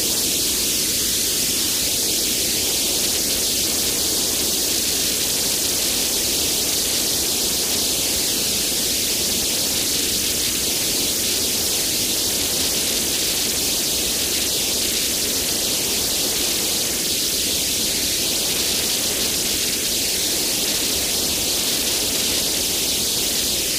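A recording of everyday sounds with overlapping chunks: at 4.98, 17.07 and 23.11 s, about 44 ms replays, heard as a brief stutter at joins spaced in multiples of 6 s. Unlike a dropout, nothing goes missing. The sound repeats instead.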